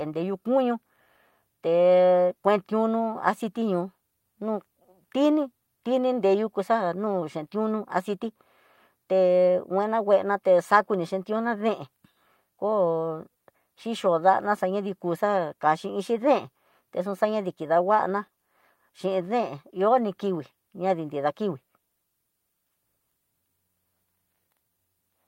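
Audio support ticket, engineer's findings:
Clock drift between sender and receiver: whole clip. Sender clock runs roughly 4% fast, so the jitter buffer keeps filling. Steady, one-directional, with no silent gaps, which sets it apart from packet loss or network jitter.

Repeated timing corrections: 0.07 s to 24.79 s. Receiver trims short pieces to keep pace with the sender's 104% rate. Small edits at uneven spacing. All cuts, no repeats, unlike random concealment glitches.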